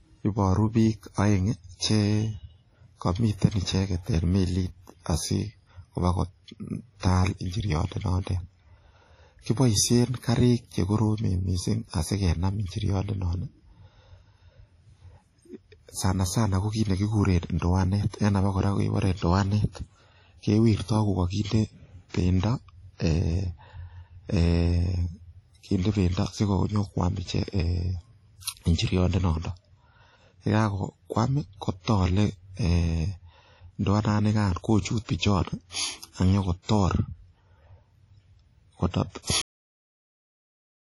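WMA compression runs through the whole speech clip. The sound is heavily damaged: ringing and washy, with a hiss that swells and fades with the signal, and nothing above 15.4 kHz. This is likely a Windows Media Audio transform encoder with long blocks. The low bitrate, which fits something around 32 kbps, zeroes the weaker spectral lines, and the quantisation noise smears across tens of milliseconds around each sound.

Pre-echo appears from 22.09 to 22.14 s, about 55 ms before a sharp attack. The attack falls late in a transform block, and the codec spreads its quantisation noise evenly across that block. Noise sized for the loud onset therefore leaks into the quiet moment just before it. A short burst of hiss arrives ahead of the attack, and the onset itself sounds soft and smeared rather than crisp.

A cut-off end occurs at 39.42 s, where the audio stops dead partway through a sound. The final buffers were never written or played, so there is no natural decay. 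The signal drops straight into digital silence and stays there for the remaining second and a half. The effect is an abrupt truncation, as if the recording were chopped off mid-sound.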